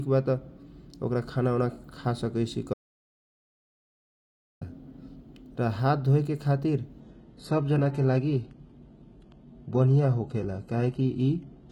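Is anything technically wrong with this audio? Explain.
Yes. From 2.74 s to 4.61 s the speech cuts to silence for about 1.88 s, with no room tone underneath: an audio dropout to silence. The input was likely lost while the recorder kept writing silence, so whatever was said during that gap is gone.

From 7.01 s to the end, the adaptive stream switches to a lower bitrate, with a sudden step in quality and no gap. The sound goes from what fits AAC-LC at 96 kbit/s to HE-AAC at 16 kbit/s, with nothing above 11.8 kHz, so the treble drops and codec artefacts rise.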